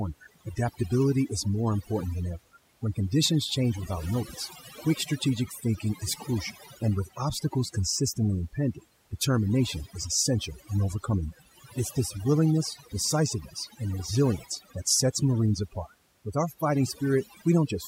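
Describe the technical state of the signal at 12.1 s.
At 12.1 s the speech carries overdone noise removal, present throughout the clip: bands near the noise estimate are pulled down, leaving near-silent gaps with twinkling specks. Unlike a gate, the suppression works band by band, not all at once.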